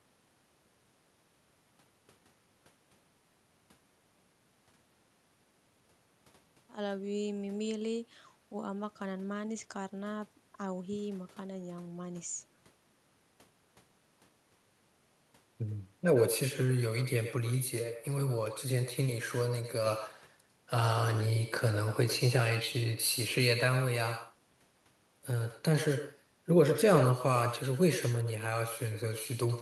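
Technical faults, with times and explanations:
Throughout, echo with no canceller: every phrase of the speech is trailed about a tenth of a second later by a fainter copy, about 11 dB down, sounding thinner than the original. The far end's loudspeaker is feeding its microphone and nothing subtracts it, so the voice returns after the network round trip. On a waveform each syllable gets a smaller delayed twin; a spectrogram shows faint repeated harmonic bands just behind each onset.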